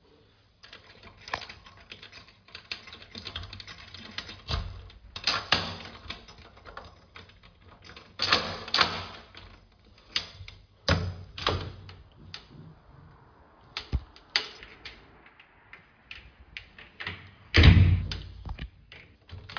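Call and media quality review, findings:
Nothing stood out on listening to these sounds; no findings to raise.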